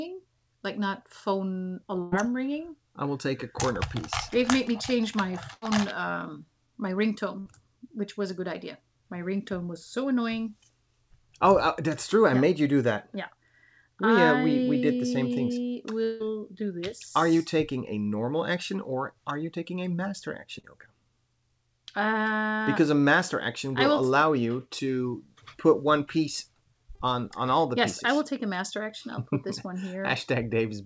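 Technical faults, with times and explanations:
2.02–2.14 s, 5.54–5.64 s and 7.40–7.47 s, burst of packet loss: in each place a run of packets failed to arrive in time, leaving holes of about 100, 80 and 60 ms. The receiver stretched the last sound across each hole as a fading buzz or hiss, then skipped ahead past the missing stretch. On a spectrogram the harmonics or noise band freeze into flat horizontal streaks that dim toward the right edge, then break abruptly into new material. The waveform shows a repeating, shrinking cycle pattern.
16.03–16.22 s, long network dropout: the sound stalls for roughly a sixth of a second and is replaced by a continuation of the last moment that keeps thinning out. It never quite drops to silence before the audio resumes further along, with about 160 ms gone. The likely cause is a brief stall in the network connection. A spectrogram shows a frozen, smeared band lasting about 165 ms and fading steadily, with a hard edge where real content returns. 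The waveform's envelope decays smoothly rather than cutting off.
20.60–20.65 s and 26.95–27.01 s, short concealed packet loss: about 40 ms went missing each time, and the decoder patched the gap with roughly 35–40 ms of extrapolated sound before cross-fading back. The result is a quick smear or wobble rather than an obvious gap. On a spectrogram it appears as a narrow blurred sliver where fine detail briefly goes soft. The waveform shows a short, overly regular stretch. Across the whole clip, the spectrogram is empty above 8 kHz, as expected from a wideband call codec.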